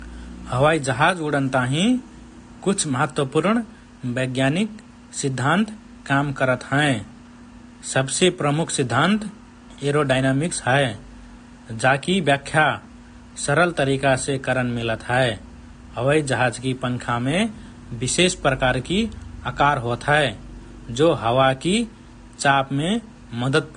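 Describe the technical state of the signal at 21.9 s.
At 21.9 s the speech carries the same damage heard across the whole clip: nothing above about 9.7 kHz, plus two different kinds of coding artefact at once. That mix most likely comes from transcoding between lossy codecs. A heavily squeezed first encode, consistent with low-bitrate AAC, set the band limit. A later, roomier pass, which fits WMA, re-spent bits on that damage and added its own artefacts. A single encode would show only one artefact character.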